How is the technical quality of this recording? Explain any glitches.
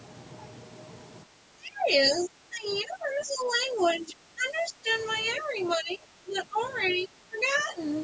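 The recording has one recurring fault: the speech repeatedly drops in level, most likely speech suppressed in double talk. Both sides of the call seem to talk at once, and an echo canceller that cannot tell the near talker from loudspeaker echo turns everything down. The dips run from 1.23 to 1.92 s (the deepest, about 25 dB), 2.15 to 3.81 s, 3.98 to 4.9 s, 5.39 to 5.57 s (slight, about 5 dB), 5.76 to 6.59 s and 6.97 to 7.77 s (about 15 dB each). During each one the voice sinks.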